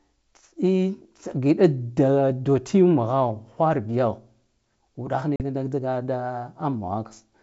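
At 5.36 s the speech drops into a hard-edged hole lasting until 5.42 s: packet loss on an ADPCM call, with about 40 ms of audio missing, which fits a couple of packets going astray. The gap was filled with silence, leaving the decoder's predictor and step size out of step with the sender's. On the waveform it is a flat line with abrupt edges. On the spectrogram it is a blank vertical strip across the full 7 kHz G.722 band.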